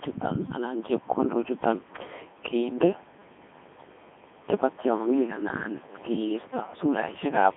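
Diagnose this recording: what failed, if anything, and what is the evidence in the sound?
Codec stage: Codec 2 vocoder throughout. Speech sounds robotic and buzzy, rebuilt from sine waves. Nothing above 3.6 kHz, fitting a 150 Hz to 3.5 kHz line band, with the codec in its 3.2 kbit/s mode.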